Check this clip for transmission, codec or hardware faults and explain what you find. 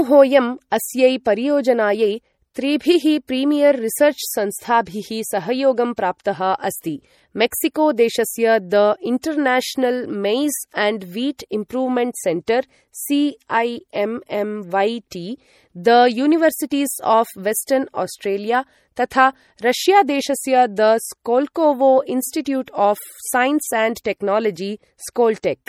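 One codec fault runs through the whole recording. MP3 compression, from start to finish: nothing is present above 18.8 kHz, and the speech has a plainly audible watery, swirling quality, with metallic chirps on s sounds and softened consonant attacks. The likely cause is an MP3 encoder short of bits, consistent with a bitrate around 48 kbps, trimming the top band and dropping quiet frequency lines that flicker between frames.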